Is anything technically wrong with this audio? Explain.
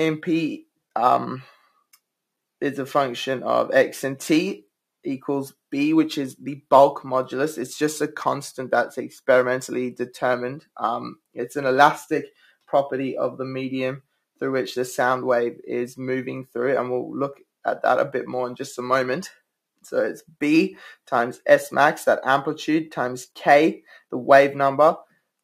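Yes. From 12.29 to 12.71 s, the sound sinks, falling by about 19 dB at its deepest and affecting around 300 ms in all. This is sound cut by the noise suppressor, which mistook this material for background noise and attenuated it.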